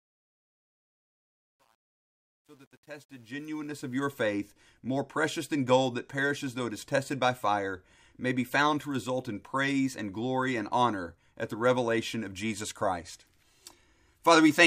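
A speech recording opening with a fade-in that shows truncation distortion on a fade from 0.0 to 4.08 s, gritty and worst until 3.46 s. Too few bits without dither, consistent with about 10-bit resolution, make a waveform of stair-steps and a spectrogram of broadband speckle.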